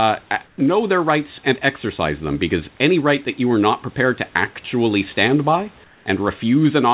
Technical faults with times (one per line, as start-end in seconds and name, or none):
0.46-0.58 comfort noise in place of the background
5.84-6.06 comfort noise in place of the background